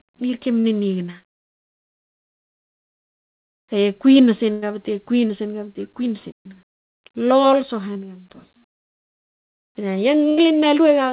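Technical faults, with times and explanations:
0.60 to 0.66 s, 5.28 to 5.31 s and 7.93 to 7.97 s: short concealed packet loss. About 40 ms, then twice about 20 ms, never arrived in time. The receiver extended the preceding sound by its pitch or as shaped noise and crossfaded back, leaving brief smears or wobbles where short sounds may drop out.
4.52 to 4.64 s and 10.29 to 10.39 s: burst of packet loss. Roughly 100 ms and 80 ms of consecutive audio were lost. Concealment held the last sound and faded it, giving a sustained buzz or dying hiss, and the speech picks up later with the intervening portion gone.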